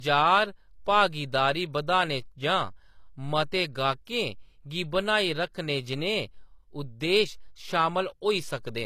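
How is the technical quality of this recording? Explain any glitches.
The recording has a technical fault that runs through the whole clip. It sounds like low-bitrate audio saved at a high bitrate: nothing is present above about 14.9 kHz, and the speech keeps the artefacts of the earlier low-bitrate encoding. The likely cause is an earlier low-bitrate encode, consistent with HE-AAC around 24 kbit/s, later re-saved as roughly 196 kbit/s MP3. The larger file could not restore what was discarded. On a spectrogram, energy stops abruptly at that ceiling for the full duration.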